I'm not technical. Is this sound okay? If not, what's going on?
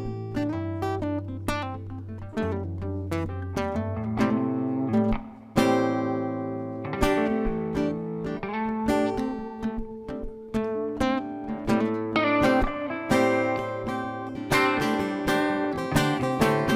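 Yes, nothing stood out as wrong when listening to this sound.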